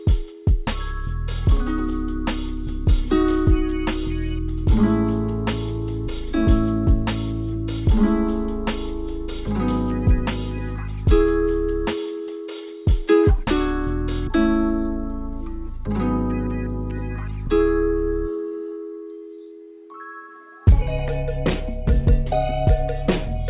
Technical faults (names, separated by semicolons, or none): none